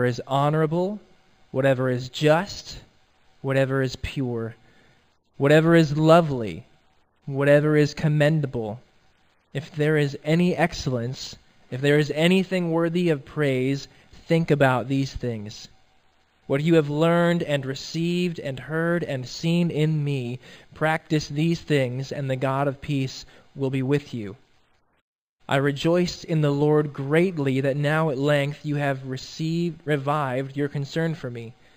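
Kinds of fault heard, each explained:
Imaging from linear upsampling: the audio was raised from 11 kHz to 48 kHz by joining samples with straight lines, a weak filter. The top dulls near 5.5 kHz, and a mirrored copy spanning 5.5 to 11 kHz, roughly 30 dB down, adds a faint metallic shimmer on sibilants and high notes.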